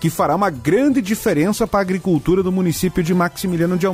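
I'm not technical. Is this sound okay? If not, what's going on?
Yes, the signal is technically sound, with nothing wrong in how it was recorded or carried.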